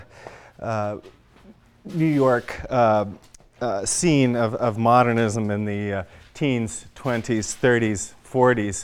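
No technical faults are audible anywhere in the clip.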